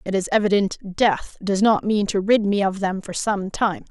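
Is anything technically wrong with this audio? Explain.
No, the speech signal holds steady and continuous throughout, with no audible technical faults.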